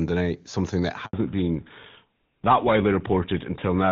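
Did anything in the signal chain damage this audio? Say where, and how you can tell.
Yes. A handover gap at the network stage: no speech frames arrived while the call switched links, so after "something that" the sound drops out for 80 ms, from 1.05 to 1.13 s.

A fallback to narrowband at the codec stage: from 1.13 s on, HD Voice gives way to an older codec, which fits GSM full rate. Nothing above 4 kHz remains, so the speech sounds duller.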